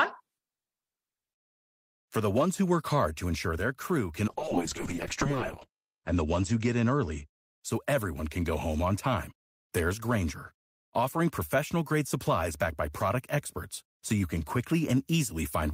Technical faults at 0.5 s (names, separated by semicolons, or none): none